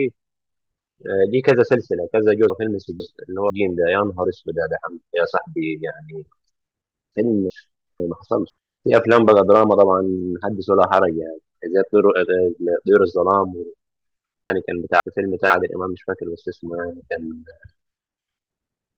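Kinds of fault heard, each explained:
Chunks out of order: at 2.5–3.5 s, 7.5–8.5 s and 14.5–15.5 s, a half-second chunk of speech plays one chunk late, swapping with its neighbour. Unlike a dropout or repeat, nothing is lost or doubled. The speech briefly jumbles.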